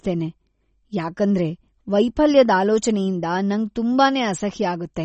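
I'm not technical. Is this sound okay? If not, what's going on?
No. MP3 compression is audible throughout the speech. Nothing above about 8.3 kHz remains, so it sounds dull and watery, likely from an encoder short on data that discarded the treble and faint detail to save space.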